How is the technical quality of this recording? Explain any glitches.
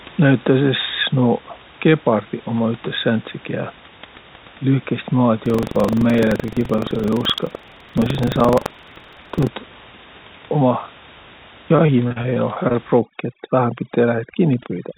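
The recording has three distinct faults. It also carries room noise about 21 dB below the speech and is band-limited with nothing above 4 kHz, consistent with a G.711 mu-law call path at 64 kbps.

From 5.42 to 9.48 s there is buffer tearing. The writer and reader of the playback ring buffer have drifted so they cross every period, leaving a small slice of each buffer holding audio roughly a tenth of a second stale. The hard joins produce a rattling buzz at 23.4 Hz that is present whenever speech is, which fits a 2048-sample buffer.

From 11.76 to 12.76 s there is repeated packet loss, giving robotic-sounding speech. Ten gaps, the longest 37 ms, were patched by extending the preceding sound, so 22% of that second is concealment. The result is choppy and robotic, with fragments of speech missing.

From 12.99 s to the end, overdone noise removal sets in. The suppressor is cutting frequency bands that sit near its noise estimate, taking quiet speech components with them. 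The background drops and breaks up into twinkling specks.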